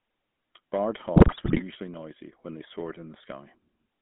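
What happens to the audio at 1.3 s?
At 1.3 s the sound falls inside a burst of GSM bit errors running from 1.16 to 1.62 s. Corrupted bits reach the speech decoder, which points to a weak radio link. Bad filter, pitch and gain values distort the spectrum and jolt the level frame by frame. The span fits around twenty damaged frames. The result is squawks, pops and a gargling break-up of the speech.

Underneath, the GSM full-rate codec colours the whole clip, including this moment. It models the vocal tract and drives it with a sparse, regularly spaced pulse excitation. That fits 13 kbps full-rate coding. The band runs only from about 150 Hz to 3.5 kHz, so the top end is gone. The speech carries a plainly audible buzzy, gravelly roughness.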